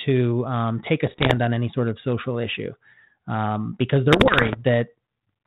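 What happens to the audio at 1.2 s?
Bit errors on an ADPCM link break up the audio from 1.07 to 1.37 s, between "um take a" and "on any sort of". At a bit error rate of around 1.5%, each flipped bit throws off the decoder's step size and predictor, so the damage rings on for milliseconds and is heard as pops and rough bursts with brief jumps in level. On the waveform these appear as sudden spikes and uneven envelope steps. On a spectrogram they show as vertical broadband streaks that stop near the 4 kHz ceiling set by the 32 kbit/s G.726 coding.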